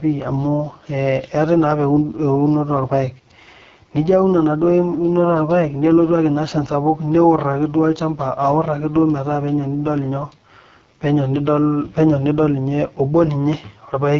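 Throughout the speech, the signal has passed through an AMR wideband (HD Voice) codec at its lowest rate, with damage consistent with about 6.6 kbit/s. The vocal tract model is badly starved, so voices turn rough and raspy, and nothing remains above 7.6 kHz.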